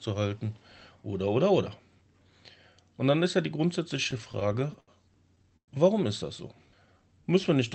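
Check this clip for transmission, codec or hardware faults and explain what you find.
Two kinds of network fault appear in this speech, carried over an Opus call path whose content stops near 8 kHz, which fits a 24 kbps setting.

Repeated stalls (stutter), 3.97–4.91 s after "dann ist ja die" and 5.36–5.71 s before "warum ist das": late packets emptied the jitter buffer, so the receiver stretched the last sound, filling 181 ms over 12 gaps and then 142 ms over 4 gaps, the longest 112 ms. The result is choppy, dragging audio, seen as frozen, smeared spectrogram slices.

Jitter buffer slow-down, 6.48–7.71 s: to rebuild its reserve, the buffer repeated pitch periods, adding 152 ms. Speech runs at 88% speed at unchanged pitch, with stretched harmonics and repeating waveform cycles.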